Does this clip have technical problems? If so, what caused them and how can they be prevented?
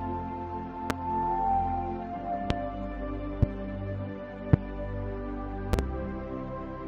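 Yes. Loud pops break through at 0.90, 2.50, 3.43 and 4.53 s, each about 28 ms long, then a double pop from 5.73 to 5.82 s. They peak roughly 20 to 25 dB above the sound, which continues underneath. A likely cause is a voltage pulse from a plug, switch or static discharge. Secure connectors and avoid switching equipment while recording.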